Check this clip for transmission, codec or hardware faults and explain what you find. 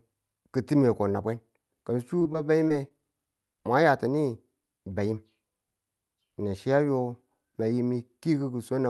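One transmission fault stands out in this speech clip, heard over a call path whose top end stops around 12 kHz with the Opus settings used here. From 2.19 to 2.92 s, repeated packet loss gives a robotic sound: five short gaps, the longest about 23 ms, were patched by extending the previous sound. This leaves choppy speech with pieces missing, unlike a single clean dropout or click.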